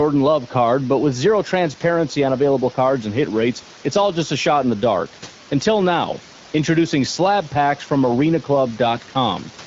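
No faults in the speech; the room noise sits about 24 dB under it, and the band-limited, lightly coded character fits AMR wideband (HD Voice) at 12.65 kbit/s.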